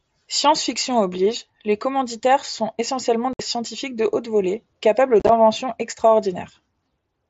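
At 3.33 s, between "les commanditaires sont essentiellement" and "scientifiques de haute volée", about 60 ms of speech drops out to silence: unconcealed Bluetooth headset packet loss, where lost voice packets between headset and phone were simply left empty, which fits eight lost 7.5 ms frames. A second loss at 5.20 s, after "de haute volée capables", scatters about 52 ms of gaps over 90 ms, the longest 30 ms, giving a chopped crackle through the mSBC wideband audio. On a waveform these show as flat, hard-edged gaps; a spectrogram shows vertical blank strips.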